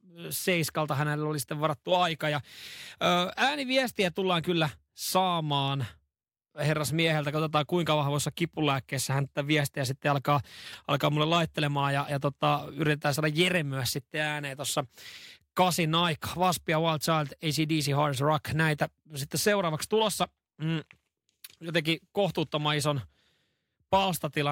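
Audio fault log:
No fault is logged for this speech clip.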